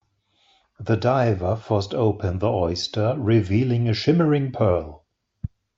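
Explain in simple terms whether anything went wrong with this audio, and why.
MP3 compression damage runs through the whole speech clip, from the first second to the last. The sound is watery and swirly, and s sounds come out metallic. This is likely from squeezing the file too hard. The encoder dropped quiet details, which flicker in and out from moment to moment, so the speech loses its clean edges.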